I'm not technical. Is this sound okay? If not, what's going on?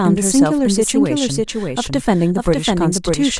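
No. This is a doubled audio track. The same speech plays twice, all the way through. A second copy trails the first by roughly 0.7 of a second, only a little quieter. It sounds like a clean, flat echo. There is no fading tail or room sound. The likely cause is the recording being picked up a second time through a slower route, or an edit leaving two copies out of step.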